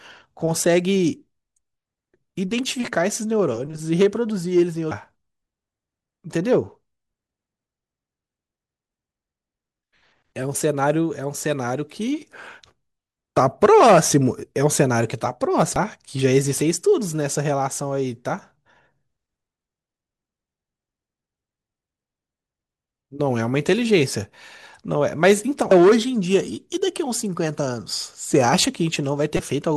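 Damaged data in a compressed stream at 4.91, 15.76 and 25.71 s, and from 29.37 to 29.40 s. Corrupt frames throw the decoder out of sync, leaving brief blips in the speech.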